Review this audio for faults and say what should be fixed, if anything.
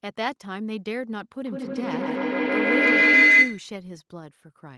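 Feedback howl, 1.45 to 3.78 s: a microphone-loudspeaker loop gains on each pass, ringing near 2 kHz about 14 dB over the speech, pulsing roughly every 150 ms. To prevent it, mute the microphone and speaker on all but one device in the room, or have participants use headphones.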